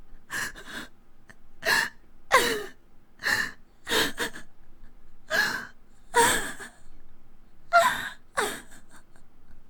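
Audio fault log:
throughout: clock drift between sender and receiver. The sound carries small, unevenly spaced timing hiccups rather than one clean glitch. The sender's audio clock runs roughly 3 percent slower than the receiver's, so the jitter buffer keeps draining and the receiver must keep patching gaps.
0.06–9.69 s: repeated timing corrections. The sound drags slightly, at 98 percent speed, with faint stutters and an unsteady pace. To keep up with the slow sender, the receiver repeatedly repeats short pieces, always lengthening, adding around a fifth of a second overall.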